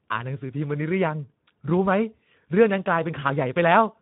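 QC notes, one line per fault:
Throughout: Speex codec. The speech was passed through Speex, a CELP coder, at a low quality setting. The hoarseness fits a rate of about 11 kbps. At that rate the coder has too few bits to model the excitation signal properly, so it rebuilds each frame from a coarse approximation of what drives the vocal tract. The damage is plainly audible. The speech comes across as grainy, noisy and hoarse rather than clean, with the roughness sitting inside the speech itself across the whole clip.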